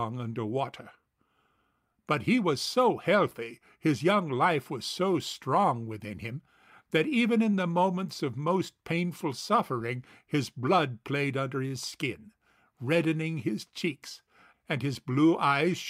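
It's a speech clip with clock drift between sender and receiver: the sender's clock runs about 2% slow, so the receiver's jitter buffer keeps draining. That forces repeated timing corrections from 0.32 to 15.5 s, with small repeats at uneven gaps that play the speech at 98% speed, adding roughly a third of a second and giving slight hiccups.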